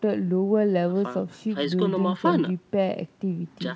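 A speech recording carried over a wideband call path, its content ending at 8 kHz in the way a G.722 codec leaves it, with no technical fault to be heard anywhere in it.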